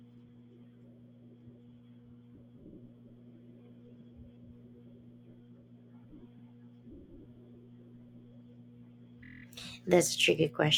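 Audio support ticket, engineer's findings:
Stutters in the speech: short chunks replay at 2.68 s and 4.00 s (72 ms each), 6.37 s (48 ms), and a 24 ms loop from 9.23 to 9.42 s. These are repeated frames, likely from the encoder or transport, which fits 24 ms frames being duplicated.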